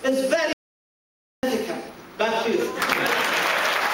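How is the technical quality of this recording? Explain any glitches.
There is one glitch, an audio dropout to silence. At 0.53 s the sound cuts off dead and returns at 1.43 s, leaving about 0.9 s of total silence with no room tone at all. The likely cause is a lost input while the recorder kept writing silence, so whatever occurred then is gone.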